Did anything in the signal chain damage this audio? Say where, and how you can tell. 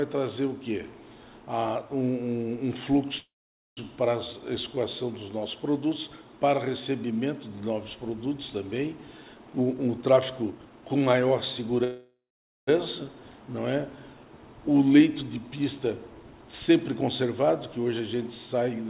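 Yes. Packet delivery on the network likely stalled, draining the jitter buffer from 3.18 to 3.79 s and from 11.84 to 12.69 s. Each call audio freeze extends the last sound as a fading buzz, then about half a second of silence, before the audio resumes without loss.

The overfilled jitter buffer then caused a speed-up, repeatedly cutting out pitch-period slices. From 9.51 to 11.83 s the audio runs at 123% speed, dropping roughly half a second, and from 15.81 to 18.85 s at 108%, dropping about 0.3 s. It sounds hurried at an unchanged pitch.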